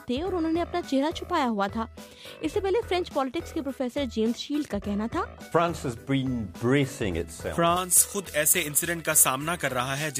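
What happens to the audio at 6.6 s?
Nothing goes wrong at 6.6 s; the audio plays through that moment intact, with no dropout, click, distortion or other fault.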